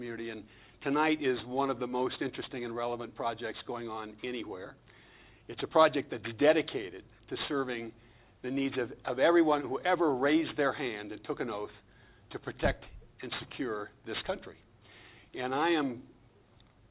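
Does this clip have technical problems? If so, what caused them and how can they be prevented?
Yes. Aliasing runs through the whole clip. The sound was resampled to a much lower rate without a low-pass filter first, which fits a drop from 48 kHz to 8 kHz. Everything above the 4 kHz fold point reflected back down into the audible band as false, unrelated tones, sitting roughly 20 dB below the signal. High-frequency detail turns gritty and metallic, and the spectrum runs hard right up to the 4 kHz edge. To prevent it, apply a steep anti-aliasing low-pass filter below 4 kHz before downsampling, or use a resampler that filters automatically.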